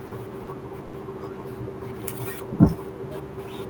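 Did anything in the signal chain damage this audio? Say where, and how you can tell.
Yes. In the codec, the sender's voice detector likely took speech for background and stopped transmitting, which fits Opus DTX, and the receiver filled the gaps with comfort noise. Sound dropped by the voice detector occurs at 0.07–0.11, 0.43–0.47 and 0.85–0.93 s, where speech turns into flat noise for 40 to 80 ms.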